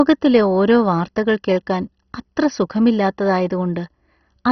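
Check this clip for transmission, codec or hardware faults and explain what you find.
One codec fault runs through the whole speech clip. Likely MP2 compression starved of bits switched off the upper sub-bands, leaving nothing above 6.1 kHz: dull, gurgling, granular speech, which fits a very low bitrate near 32 kbps.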